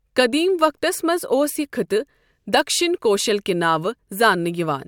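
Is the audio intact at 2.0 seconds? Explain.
Yes, the speech at 2.0 seconds is intact, with no dropout, click or other fault at that point.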